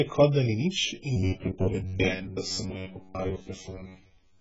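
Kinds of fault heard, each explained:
AAC compression: The speech was likely encoded with AAC-LC at a very low bitrate, around 12 kbps by the sound of it. Quantisation strips the spectrum heavily and nothing survives above 7.6 kHz, so the result is dull and smeared with a fizzy, warbling texture.
robotic sound from repeated short buffers: From 1.17 s to the end, fresh audio likely arrived too seldom, so a slice of about 10.7 ms was replayed over and over, filling most of the time. The repetition imposes a fixed 93.8 Hz metallic buzz that only loosely follows the speech.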